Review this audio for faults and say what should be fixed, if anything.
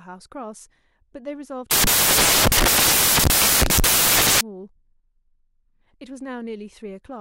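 From 1.71 s to 4.41 s the speech gives way to loud, hissing white noise, the sound of samples built from the wrong bytes. Each sample's bytes are being joined in the wrong order or at a one-byte offset, so the rapidly changing low bits end up as the high part of every value. On a spectrogram this shows as a solid wash across all frequencies. To prevent it, make the reader's byte order and sample alignment match how the audio was written.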